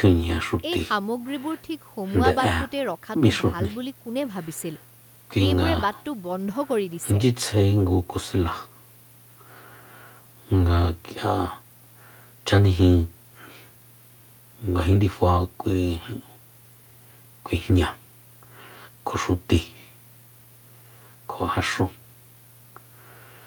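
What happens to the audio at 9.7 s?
Nothing goes wrong at 9.7 s; the speech carries straight through that moment with no dropout, click, distortion or other technical fault.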